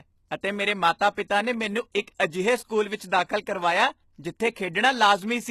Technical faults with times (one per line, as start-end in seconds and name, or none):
0.00-5.50 HE-AAC compression